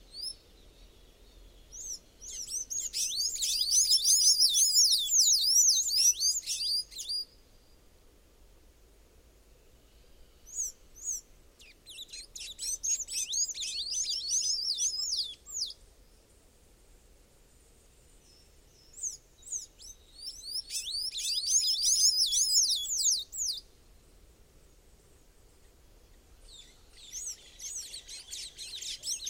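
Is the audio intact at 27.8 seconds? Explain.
No, at 27.8 s you're still hearing the doubled audio track that runs the whole clip: a second full-band copy trails about half a second behind at roughly the same level, with no decay or room colour. Most likely a slower second capture path got mixed in.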